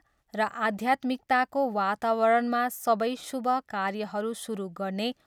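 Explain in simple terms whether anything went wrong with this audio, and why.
Nothing went wrong here; the speech comes through without any technical problems to point to.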